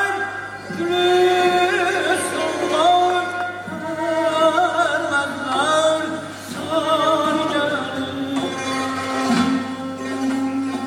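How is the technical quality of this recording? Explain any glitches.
A steady low drone runs under the sound from start to finish: mains hum, centred on 50 Hz with a few harmonics stacked above it, sitting roughly 25 dB below the signal. The cause is the power line leaking into the audio path, typically through a ground loop between connected equipment or magnetic pickup from a nearby transformer, which imprints the 50 Hz supply frequency onto the recording.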